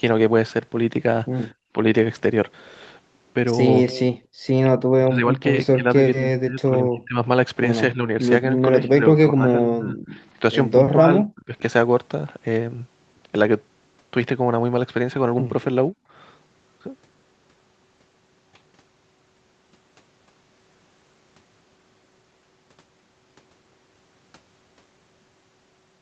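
From 1.54 to 1.72 s the room sound falls away by about 26 dB, then returns: background gated by the echo canceller, which clamped the microphone while the loudspeaker played. At 3.85–4.01 s a faint delayed copy of the speech, about 15 dB down and trailing by roughly 237 ms, surfaces. This is an echo leak, likely residual loudspeaker pickup the canceller missed. Gating returns at 4.20–4.46 s, dipping about 32 dB. From 4.99 to 7.18 s and 7.94 to 9.96 s the talker's speech sinks around 20 dB in patches, and again near 30 dB at 10.85–11.62 s. That is likely speech suppressed in double talk, with the canceller ducking both sides while they overlapped. A much quieter echo, around 40 dB down at 239 ms, slips through at 10.19–10.27 s. A last, shallower gate of about 16 dB comes at 15.94–16.10 s.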